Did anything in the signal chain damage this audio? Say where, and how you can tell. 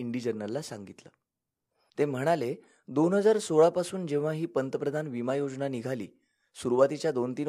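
No, nothing in the signal chain has damaged this speech recording. At no point does any stage of the path leave an audible mark on the sound.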